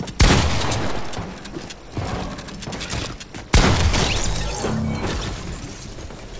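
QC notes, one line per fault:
Nothing stood out on listening.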